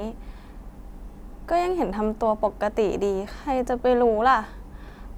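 No technical faults can be heard anywhere in this recording.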